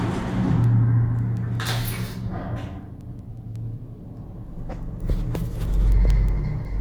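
From 0.28 s to 6.65 s, word clock ticks repeat about every 0.2 s, some forty in all. The receiver's unlocked clock drifts around 100 ppm, dropping or repeating one sample each time. The sharp clicks appear as evenly spaced thin vertical lines on a spectrogram.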